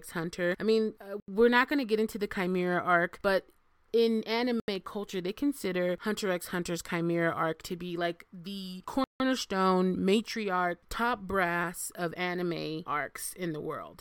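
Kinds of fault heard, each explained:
Block of digital silence: the speech cuts to silence and comes back with no fade. It happens three times: for 80 ms after "I mean uh", for 80 ms after "arc but in", and for 160 ms after "to be like the". A gentler dropout would ramp down, and concealment would fill the gap with guessed sound. Here there is neither, only a hard-edged gap of silence.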